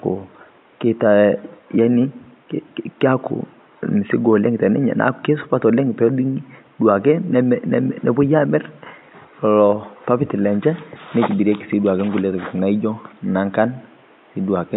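No technical faults are present in this speech recording; the only background is the room's own noise, sitting about 36 dB below the speech.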